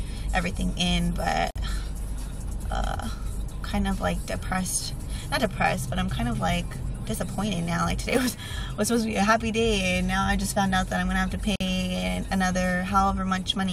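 At 1.51 s the sound drops out for about 50 ms and then carries on exactly where it left off. That's a gap at a join of encoded pieces. The audio was encoded in chunks and stitched back together without trimming, so each encoder's lead-in silence and last-frame padding stayed in. The edges are abrupt but smeared by the codec, and the spacing suggests pieces roughly 10 s long.

Between 8.10 and 8.32 s there's an irregular burst of scratchy crackle, a little over a fifth of a second long. That's loose connector crackle. A worn or dirty contact somewhere in the chain was making and breaking as it moved, chopping the signal on and off in rapid, uneven bursts. You get that rough, grainy texture rather than a clean click.

Then at 11.56 s the join gap shows up again, 48 ms this time and exactly 10 s after the first. It's the same cause: untrimmed encoder delay and padding at the boundary between two separately encoded pieces, with the same smeared-edge dropout and the sound resuming seamlessly afterwards.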